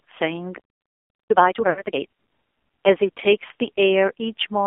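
Throughout, the speech carries AMR narrowband mobile codec coloring. The line band runs from about 300 Hz to 3.5 kHz, and nothing above that survives. Heavy buzzy, synthetic damage points to a low mode near 5.9 kbps, where few pulses model each subframe.

From 0.58 to 1.30 s there is a playback stall: the sound cuts off mid-flow and stays silent for about 0.72 s. The likely cause is that the player ran dry or its thread was blocked before output resumed.

From 1.30 to 2.02 s a time-compressed catch-up follows. The player clears its backlog at 2.0x speed by cutting and cross-fading short segments, so the audio sounds hurried at unchanged pitch.

Inside that stretch, from 1.70 to 1.82 s, lost AMR speech frames cause a 60 ms dropout. This fits three consecutive 20 ms frames failing checks. The decoder repeats the last good parameters at falling gain, so the sound smears and fades briefly before returning rough.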